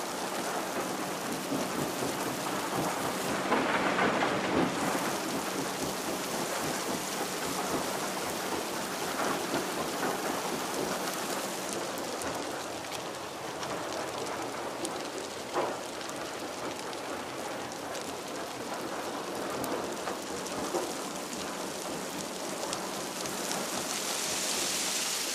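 No technical faults are audible anywhere in the recording.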